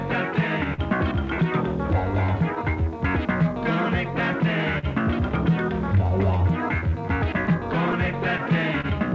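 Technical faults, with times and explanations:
Throughout: clock drift between sender and receiver. The sender's clock runs roughly 2 percent slow, so the buffer keeps draining. This shows as irregular small seams in the waveform.
0.74–0.81 s and 4.79–4.86 s: short stall from a late packet. About 40 ms of sound is held until the packet arrives. Each stall shows as a flat, smeared spectrogram stripe.
2.85–6.91 s: repeated timing corrections. Repeated short pieces add about 50 ms, slowing playback to 99 percent. This shows as tiny repeated waveform segments.
7.46–8.87 s: scattered short gaps. About four small holes, the longest near 30 ms, are patched by continuing sound. They appear as brief vertical smears, below an 8 kHz ceiling.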